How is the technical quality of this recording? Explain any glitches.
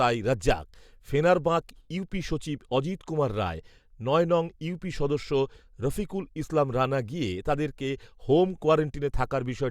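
No glitches can be heard.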